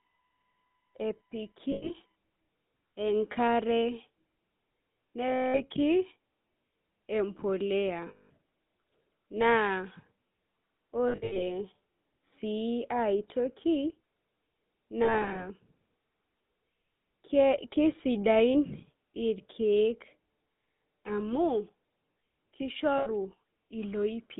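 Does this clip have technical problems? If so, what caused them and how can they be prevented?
Yes. The GSM full-rate codec runs through all 24 seconds. Everything sits between 150 Hz and 3.6 kHz, with a buzzy, gravelly roughness from the coarse pulse excitation, consistent with 13 kbps full-rate coding. A spectrogram shows a hard ceiling near 3.6 kHz. Prevent it by using a wideband or modern codec path.

A USB whine lasts from 0.0 to 2.15 s. It is a steady tone at 1 kHz and its multiples, strongest at 11 kHz, about 40 dB below the signal. The bus's 1 ms frame timing is leaking through shared power or ground. A spectrogram shows flat horizontal lines at 1 kHz spacing. Prevent it with a ground-loop isolator or a separately powered interface.

Lost GSM frames occur at 1.72–1.91, 5.28–5.64, 8.08–8.30, 11.08–11.43, 15.04–15.45 and 22.98–23.07 s, covering 80 to 260 ms each. At 11.08 and 15.04 s the losses are scattered in short runs. 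Each gap is filled by repeating the last good frame, so the sound freezes into a metallic ring. A spectrogram shows smeared, frozen bands. A stronger, steadier radio link prevents this.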